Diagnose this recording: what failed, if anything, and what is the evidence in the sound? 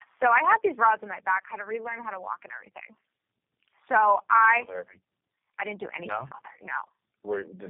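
The failure is at the codec stage: tandem speech coding, present throughout. The speech is rough, muffled and warbly, worse than a single low-rate coder would produce. That fits three speech codecs in a row, G.729A, then AMR-NB at 6.7 kbit/s, then G.729A again, joined by G.711 links. Each coder re-encodes the previous one's errors, so the distortion compounds. A spectrogram shows nothing above 3.3 kHz, with smeared formants and ragged harmonics.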